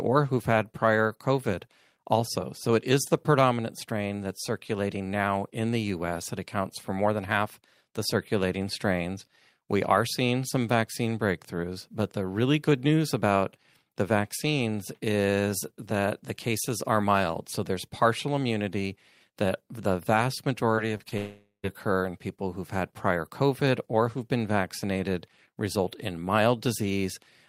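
Short concealed packet loss occurs three times in quick succession, at 20.75 to 20.79 s (right after "immunity that the vast"), 20.97 to 21.01 s and 21.09 to 21.13 s. Each time about 20 ms of the speech failed to reach the decoder in time, and the receiver covered the hole by extending the preceding sound for roughly 20 ms before blending back into the real audio, so each one is heard as a brief smear or wobble.

A long network dropout follows at 21.17 to 21.65 s, the likely cause being that no packets arrived for about 0.46 s. The receiver kept extending the last sound through nearly the whole gap, as a fading buzz or hiss, with the final 0.1 s or so falling to silence. The speech then resumes with "occur in people who've", and the audio that should have filled the gap is gone.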